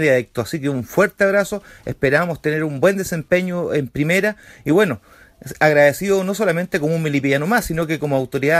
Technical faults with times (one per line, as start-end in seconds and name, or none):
none